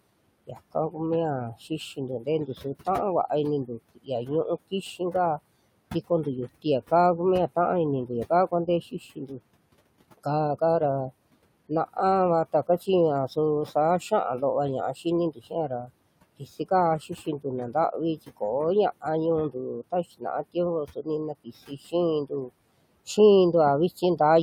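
Right from the start you can hear noise suppressor artifacts running through the whole clip. The suppressor is pulling steady background down by about 21 dB, deciding band by band and frame by frame what counts as noise, so the room noise, sitting about 19 dB under the speech, dips away in the gaps and swells back underneath the talking.

The same processor also bites into the speech itself, which is the speech cut by the noise suppressor. It happens at 0.47–0.95 s, 1.7–2.87 s, 3.66–5.39 s, 8.07–9.4 s, 12.53–18.42 s and 19.01–22.5 s. In each stretch it mistakes soft parts of the speech for noise and ducks them, by about 14 to 20 dB at the deepest. Only short bits are hit, a few tenths of a second per span and closer to half a second or more in the longer late ones. Those bits come across swallowed or faint.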